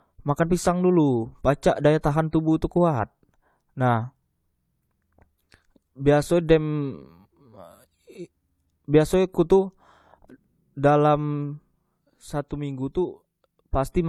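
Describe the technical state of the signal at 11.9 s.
At 11.9 s, as across the whole clip, the speech carries stacked artefacts of two different codecs, likely from transcoding between lossy codecs, with an AAC-LC layer re-encoded as HE-AAC near 48 kbit/s. Unlike a single encode, the artefacts of both codecs are heard together, and nothing remains above 20.3 kHz.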